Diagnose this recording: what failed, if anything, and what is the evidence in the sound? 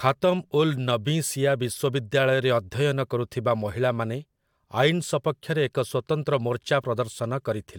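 Nothing failed in this recording, and the sound gives no evidence of a fault at any stage.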